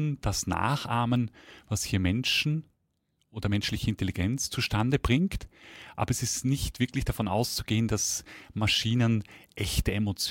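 From 0.11 s to 10.21 s, faint clock slip clicks tick roughly every fifth of a second, likely from two unsynchronised clocks about 100 ppm apart dropping or repeating one sample. A spectrogram shows evenly spaced thin vertical lines; the waveform shows tiny single-sample steps.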